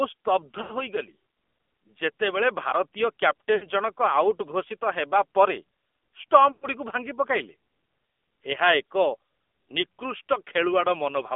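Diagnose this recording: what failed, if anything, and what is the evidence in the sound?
The damage sits at the codec stage. The speech is confined to roughly 250 Hz to 3.5 kHz, with nothing above 4 kHz. It has the buzzy, synthetic edge of the AMR narrowband mobile codec, and that edge is plainly audible throughout. At 8 kHz sampling, the codec rebuilds the voice from a vocal-tract model fed by a few pulses per subframe. The degree of coarseness fits a low mode of about 7.4 kbps.

Lost AMR speech frames come next. This happens at the radio link. Three short gaps occur, at 0.62 to 0.72 s, 3.56 to 3.66 s and 6.52 to 6.67 s. In each one the sound smears and sags rather than cutting cleanly. The gaps run about 80, 60 and 100 ms, which points to runs of four, three and five lost 20 ms frames. The decoder replays the last good pitch and vocal-tract settings while lowering the gain.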